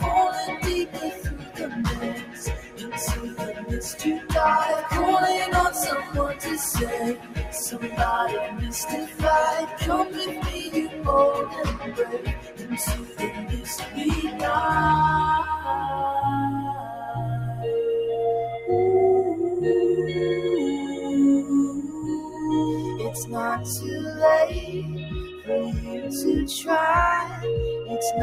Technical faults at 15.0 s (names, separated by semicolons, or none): noise suppressor applied to music or sounds